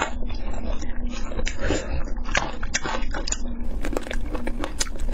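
From the start to 3.64 s the adaptive stream is starting at a low bitrate: the audio is dull, with nothing above 7.6 kHz and gritty codec artefacts, which fits a low-rate AAC version. A spectrogram shows a hard ceiling that lifts abruptly at 3.64 s, with no gap in the waveform.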